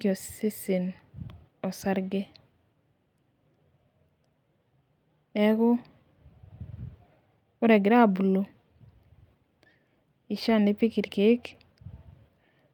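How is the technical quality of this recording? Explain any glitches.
The recording has a timing problem: the sender's and receiver's clocks disagree, and the receiver has to keep repairing the speech on the fly.

Clock drift between sender and receiver runs through the whole clip. The sender's audio clock is running fast, by roughly 4 percent, so samples arrive a little quicker than the receiver plays them out. The jitter buffer keeps swelling rather than staying level, and the playback end can't simply let it grow without adding ever more delay. The result is a steady pressure to throw audio away, which sets up the second fault.

Repeated timing corrections happen from 0.03 s to 12.5 s, with an effective speed of 104 percent. To keep the swelling buffer in check, the receiver keeps cutting out short pieces of speech, always dropping rather than repeating, at uneven intervals. Each cut is small, so it comes across as a faint hiccup or a slight stumble in the rhythm, and over the stretch the delivery feels a touch hurried and unsteady rather than smoothly paced.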